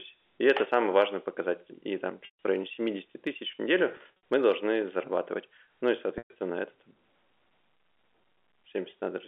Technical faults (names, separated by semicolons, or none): packet loss with pitch repetition